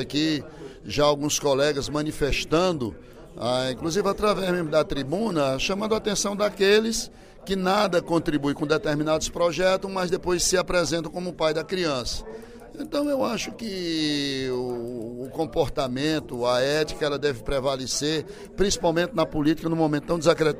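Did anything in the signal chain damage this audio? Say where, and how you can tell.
No, no damage is audible.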